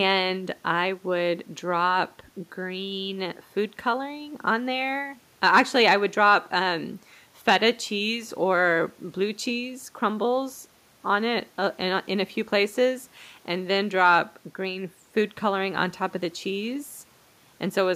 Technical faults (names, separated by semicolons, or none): none